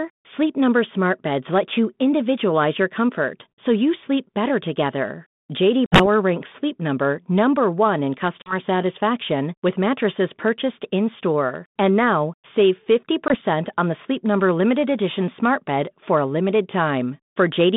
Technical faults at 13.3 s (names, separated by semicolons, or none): packet loss on an ADPCM call